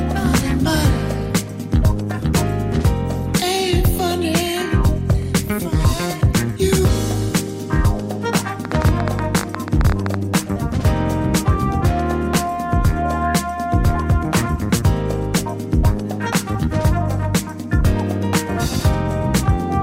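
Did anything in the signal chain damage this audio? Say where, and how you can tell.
Yes. A train of clicks runs from 8.65 to 10.15 s: about twenty irregular ticks, roughly 14 per second, about 10 dB above the sound. Likely interference on the analogue wiring.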